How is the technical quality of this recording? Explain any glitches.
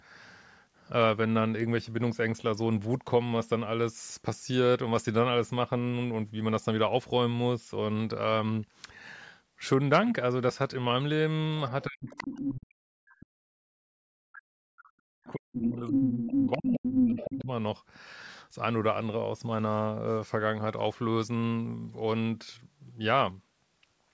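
The recording has two related faults in the same stretch of the call, between 11.87 s and 17.49 s. The rest of the band is limited to 8 kHz, consistent with normal call microphone processing.

Speech suppressed in double talk runs from 11.87 s to 17.49 s, affecting roughly 5 seconds in total. The talker's speech dips repeatedly, at its deepest by around 40 dB, so parts of it nearly vanish. Both parties were likely speaking at once. The echo canceller could not tell the local talker apart from the loudspeaker echo, so it attenuated the whole microphone signal rather than just the echo.

The other side's voice leaking through appears as a second voice in four places: 12.08–12.51 s, 15.26–15.31 s, 15.52–15.71 s and 15.92–17.38 s. The first burst is only slightly below the talker's level. The brief one at 15.26 s is far quieter. The last two are about as loud as the talker, and the final one lasts nearly 1.5 s. 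The cause is likely residual loudspeaker echo that the canceller failed to remove from the microphone path, which is why it coincides with the suppression.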